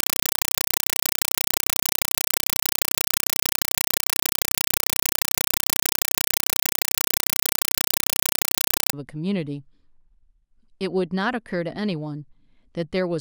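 A speech clip whose first 8.93 s is a compressed stream played as audio: an undecoded AC-3 bitstream, consistent with 256 kbps, taken as samples. It is heard as very loud chattering static. The waveform shows 5.33 ms bursts, 31.25 per second, between flat zero padding, and the spectrogram shows evenly spaced broadband vertical stripes.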